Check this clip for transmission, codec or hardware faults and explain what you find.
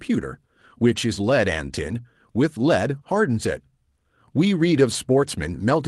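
There are two kinds of fault in this speech clip, both from packet loss on the call path.

Lost packets rebuilt from error correction occur at 0.91 to 0.97 s, 2.95 to 2.97 s and 4.93 to 4.95 s. The first rebuilt stretch is 40 ms, which fits two lost packets. The others are 20 ms each. Each missing piece came back as a low-bitrate copy carried in the following packet. So there is no gap. Those frames sound briefly rougher and noisier.

Short concealed packet loss occurs from 2.99 to 3.03 s, just after the second rebuilt stretch. About 20 ms never arrived in time. The decoder extended the preceding sound for 13 ms, then blended back into real audio. It comes through as a brief smear or wobble.

The Opus call path carries audio up to about 12 kHz.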